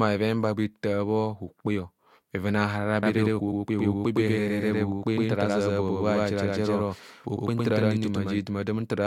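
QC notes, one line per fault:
3.03 to 8.39 s: doubled audio track. The speech picks up a second copy at about the same level, roughly a tenth of a second behind, likely from a slower capture path, starting and stopping abruptly.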